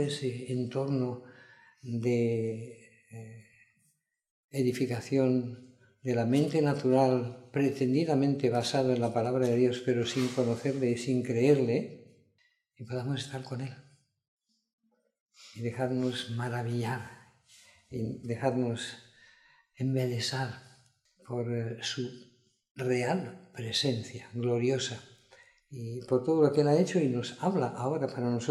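Nothing in the audio stood out as a technical fault.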